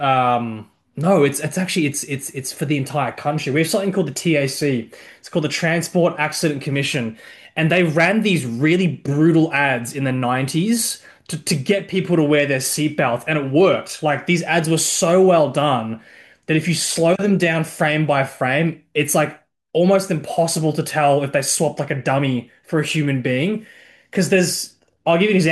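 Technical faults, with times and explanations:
No technical faults are heard anywhere in this speech clip. There are no times or ranges to report.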